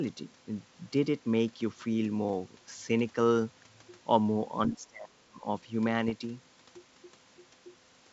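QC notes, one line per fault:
4.70–5.43 s: speech suppressed in double talk. The talker's level sinks by as much as about 30 dB for most of this span. This is likely an echo canceller attenuating the near talker while the far side speaks, unlike a dropout, which cuts to silence abruptly.
6.08–6.12 s: bit errors on an ADPCM link. A rough, crackly burst with a quick level wobble lasts about 40 ms, which fits a handful of corrupted frames. Unlike a single click or packet gap, each flipped bit throws off the decoder's step size and prediction, so the disturbance rings on briefly before the G.722 wideband sound recovers.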